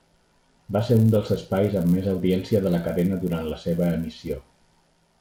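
Throughout the speech, the resampler restarted on every block: each 10 ms block was converted on its own, which fits a 24 kHz to 48 kHz upsampling, so the filter at every block edge worked from missing or wrong neighbouring samples. Those edge errors repeat at 100 per second and merge into a steady buzz at 100 Hz riding under the speech. It rises and falls with the signal and disappears in the pauses.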